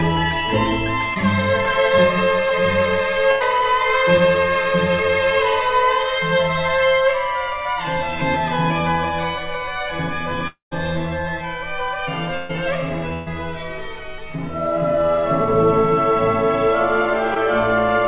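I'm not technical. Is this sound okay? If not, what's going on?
No, there are some hiccups. Around 1.14 to 1.17 s and again at 17.34 to 17.38 s you get short concealed packet loss: about 20 ms of audio went missing, and the receiver patched it, leaving a tiny smear or wobble.

From 2.49 to 3.45 s there's repeated packet loss (robotic sound). Three gaps, the longest about 90 ms, get patched in quick succession, so it turns choppy.

At 10.48 to 10.73 s the sound stretches into a fading buzz or hiss, then goes quiet for about 130 ms before resuming. That's likely a long network dropout, with roughly a quarter second lost.

Two bursts of packet loss hit at 12.37 to 12.56 s and 13.14 to 13.28 s. Each drops about 120 ms, which gets filled with a held buzz or fading hiss before the audio jumps ahead.

All of this is on top of the call line itself, which has that narrow, phone-like sound with nothing above 4 kHz.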